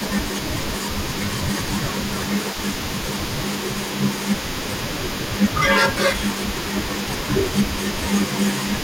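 Echo leak runs from the start to the end: a faint copy of the speech, about 10 dB below it, trails the speech by 227 ms. The likely cause is a loudspeaker on one side whose echo canceller let part of its microphone pickup return down the line.

Speech suppressed in double talk occurs at 0.0–0.7 s, 1.66–5.3 s and 5.95–8.19 s. The speech dips in pieces, by up to around 10 dB in the first two spans and around 5 dB in the last. This is likely an echo canceller mistaking overlapping talk for echo and attenuating it.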